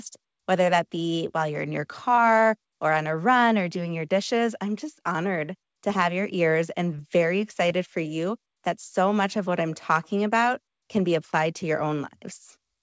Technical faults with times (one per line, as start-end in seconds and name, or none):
2.15-2.19 short concealed packet loss
5.14 short concealed packet loss
6.97-6.99 short concealed packet loss
7.69 short concealed packet loss